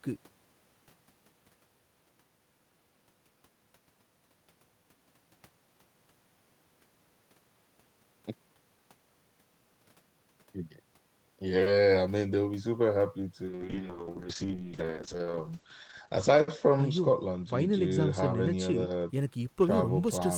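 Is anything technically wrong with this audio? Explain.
Yes. From 13.46 s to 19.35 s there is a call bitrate drop: the call's bandwidth estimate fell, so the encoder had far fewer bits to spend. The speech turns rough and watery, and its top end narrows from 20 kHz to about 8 kHz. The sound points to a fall from roughly 32 kbps to around 7 kbps, with the worst stretch lasting about 1.07 s. Unlike packet loss, nothing drops out. The signal stays continuous and simply gets coarser.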